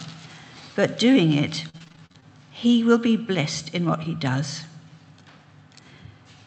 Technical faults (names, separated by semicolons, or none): repeated packet loss (robotic sound)